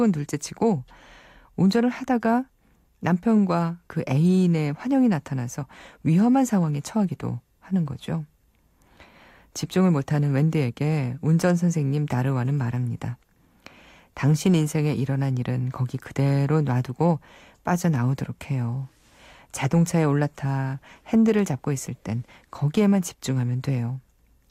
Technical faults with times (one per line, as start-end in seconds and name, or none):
none